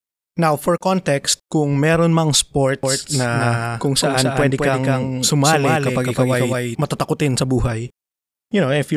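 From 2.83 s, right after "context kung meron mang", a doubled audio track appears and runs until 6.75 s, just before "matatakutin sa buhay". A second, full-band copy of the speech trails the original by roughly 200 ms at around 5 dB lower, with no decay or room colour, so it reads as a hard slapback rather than an echo. It cuts in and out abruptly. The likely cause is a second, slower capture path or two misaligned copies left in an edit.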